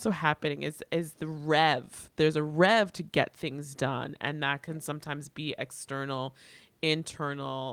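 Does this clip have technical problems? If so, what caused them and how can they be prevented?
No, this clip has no technical problems, so nothing needs preventing.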